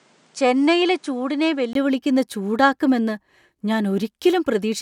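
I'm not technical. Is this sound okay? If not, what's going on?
No. Until 1.75 s the speech sounds duller and quieter, likely an input switched to a poorer device. A tiny gap then a sudden clear-up sets it apart from steady filtering.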